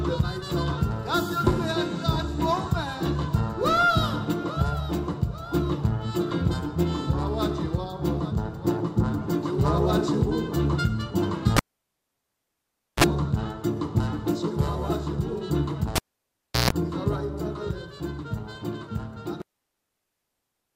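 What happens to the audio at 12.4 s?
Cable pulled and plugged in, 11.57–13.04 s: the lead drops out with a pop, 1.42 s of near silence, a brief 60 Hz buzz, and a return pop.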